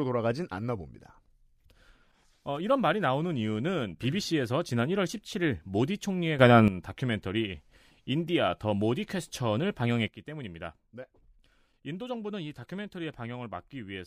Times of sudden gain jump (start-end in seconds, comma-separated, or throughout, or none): 6.39-6.68, 10.08-14.07